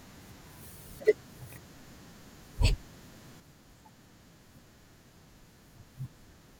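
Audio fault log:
3.4–6.59 s, sudden gain jump: the digital gain was likely switched down in a single step with no ramp, so from 3.4 s to the end the speech and the background noise drop together by about 6 dB, an abrupt step down in loudness.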